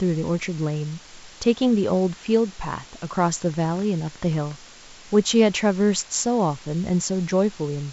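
Throughout the speech, low bit depth with dither leaves a steady, even hiss about 25 dB below the signal, consistent with roughly 7-bit quantisation; a spectrogram shows a flat noise floor up to the 7.7 kHz G.722 ceiling.

From 3.42 to 4.52 s, a train of clicks, around fifteen at about 12 per second with irregular spacing, ticks over the sound at peaks near signal level. It is likely electrical interference or a faulty connection, and appears as thin vertical lines on a spectrogram and sharp spikes in the waveform.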